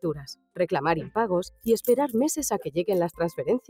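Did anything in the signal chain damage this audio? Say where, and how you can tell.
Yes, it's call processing. A speech-tuned noise suppressor applied to music or sounds pumps the level by roughly 10 dB throughout, mistaking steady content and tails for noise.

You can also hear sound cut by the noise suppressor from 0.0 to 0.59 s, dipping about 19 dB, and from 1.5 to 1.67 s, about 10 dB.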